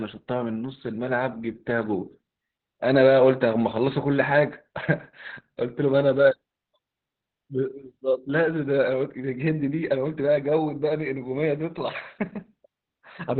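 Speech runs through heavy Opus voice compression from start to finish, and the damage is audible throughout. Nothing reaches above about 4.4 kHz, the narrowband ceiling the SILK coder falls back to at low rates, so the sound is muffled and boxy. The excitation is coded coarsely, giving a hoarse, slightly robotic edge, which fits a bitrate around 8 kbps with 20 ms frames.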